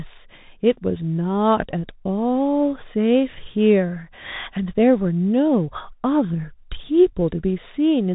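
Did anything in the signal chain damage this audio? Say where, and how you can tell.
Yes. The codec stage is the first culprit: this is Bluetooth CVSD headset codec audio throughout, consistent with a 64 kbps CVSD link. Nothing gets past 4 kHz, sibilants come out scratchy, there's a grainy hiss under the speech, and loud high sounds distort because the one-bit up/down steps can't keep pace with fast, loud detail.

Second, over the wireless link, a Bluetooth headset packet repeated at 1.71 s. The chip lost roughly 15 ms of voice, which fits about four packets, and replayed the last good bits, so you get a short burst of buzz near 267 Hz from repeats every 3.75 ms.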